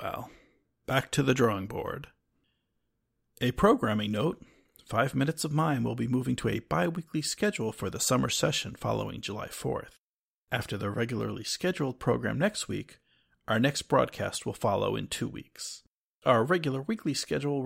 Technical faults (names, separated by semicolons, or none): none